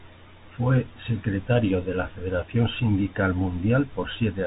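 Throughout the speech, the Bluetooth CVSD headset codec is plainly audible. Nothing passes above about 3.8 kHz, and the damage points to a one-bit delta coder running at a rate that fits 64 kbps. Each sample only nudges the level up or down, so loud, bright moments outrun the adapting step and smear into distortion, s sounds turn scratchy, and a granular hiss rides under everything. That hiss and slope overload separate it from a clean band-limit or telephone filter.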